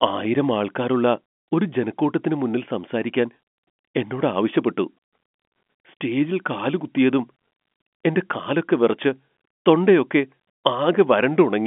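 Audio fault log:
Nothing to log here: the speech arrives as ordinary telephone audio, sitting in the usual line band of 200 Hz to 3.4 kHz with nothing heard above about 3.7 kHz, which fits G.711 mu-law telephone coding at 64 kbps doing its normal job.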